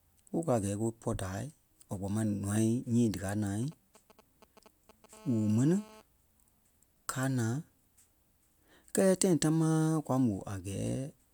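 A speech recording picks up GSM signalling bursts from 3.63 to 5.14 s: a nearby 2G phone's short radio bursts, rectified by the audio circuitry, gallop as dit-dit-dit ticks and brief 217 Hz buzzes, roughly 25 dB under the voice, seen as clustered vertical spikes in the waveform and stacked harmonic blips on a spectrogram. From 5.14 to 6.02 s it becomes a steady GSM phone buzz as the phone enters a call, a hard raspy 217 Hz tone about 24 dB below the speech, drawn as continuous evenly spaced harmonic lines across the spectrogram.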